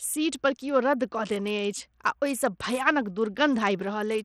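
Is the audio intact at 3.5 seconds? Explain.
No. Bluetooth SBC compression damage runs through the whole speech clip, 3.5 s included, and is likely the cause. A starved bit pool leaves the upper sub-bands with few or no bits, so treble flickers and gritty quantisation noise and aliasing sit on the sound, consistent with roughly 80 kbps.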